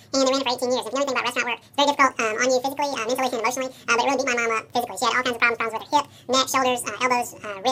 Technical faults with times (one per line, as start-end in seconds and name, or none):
0.00-7.71 audio read two samples at a time (double speed)